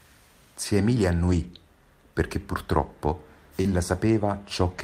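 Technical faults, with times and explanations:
1.27–1.45 s and 3.65–3.67 s, lost packet rebuilt from error correction: about 100 ms, then 20 ms, are replayed from the low-bitrate copy each following packet carried. There is no gap, but those stretches sound rougher and noisier. The first fits five lost packets, the second one.
3.61–3.67 s, short concealed packet loss: right after "perché purtroppo", about 40 ms arrived too late to decode. The receiver extended the preceding sound for about 33 ms and blended back, giving a brief smear or wobble where that audio should be.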